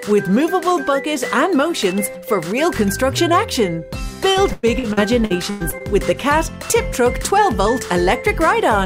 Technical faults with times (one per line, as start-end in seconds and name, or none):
4.33-5.82 repeated packet loss (robotic sound)